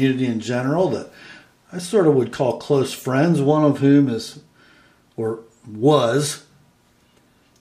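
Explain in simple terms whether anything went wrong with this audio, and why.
Nothing went wrong here.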